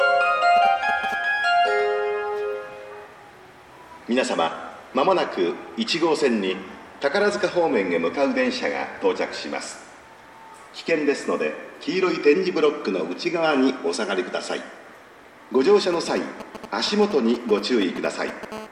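From 0.57 to 1.14 s, and again from 15.93 to 18.53 s, there are GSM signalling bursts: a nearby 2G phone's radio pulses get rectified into galloping ticks and 217 Hz buzzes, roughly 10 dB under the sound. At 18.53 s it turns into a steady GSM phone buzz, the phone now transmitting in bursts 217 times a second, a raspy 217 Hz drone about 12 dB down until 18.67 s.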